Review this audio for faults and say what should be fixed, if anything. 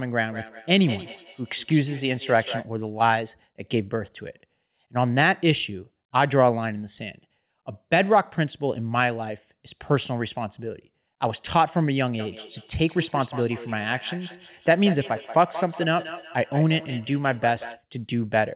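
There's feedback echo between two devices from 0.31 to 2.72 s and again from 12.19 to 17.85 s. The speech comes back roughly every fifth of a second, peaking at about 13 to 14 dB below the talker. It sounds thin and ringing, partly because the call audio stops at 4 kHz, as you'd expect from a G.711-style narrowband link. A second device in the room is replaying the call into a microphone whose echo canceller can't see that playback. To prevent it, mute or disconnect the extra device, or have everyone in the room share one device.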